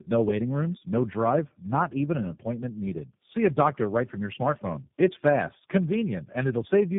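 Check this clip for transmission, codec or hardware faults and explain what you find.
The clip has one fault, present throughout: tandem speech coding. The speech was decoded and re-encoded at each network border, so every coder worked on the previous one's damage, and the roughness, muffling and warble built up. It sounds like three narrowband speech codecs in a row, with a final stage consistent with G.729A. A spectrogram would show nothing above 3.7 kHz and smeared, unsteady harmonic detail. The waveform would look blunted and roughened.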